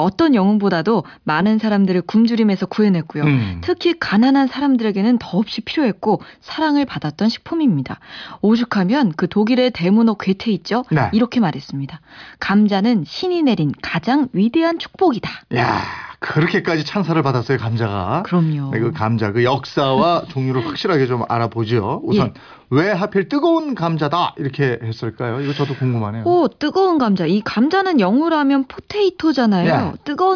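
No technical faults can be heard in this recording.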